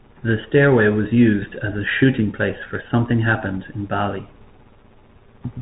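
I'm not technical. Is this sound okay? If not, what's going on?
No. Bluetooth CVSD headset codec, throughout: a headset link stripped everything above 3.8 kHz, leaving muffled speech with scratchy s sounds and a grainy hiss.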